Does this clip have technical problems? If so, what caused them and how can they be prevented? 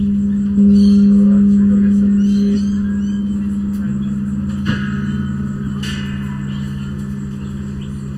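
Yes. Channel delay (comb filtering) runs throughout. One channel lags the other by under a millisecond, so summing to mono cancels shared content at evenly spaced frequencies, starting near 700 Hz, which makes the sound hollow and phasey. Time-align both channels before any mono fold-down.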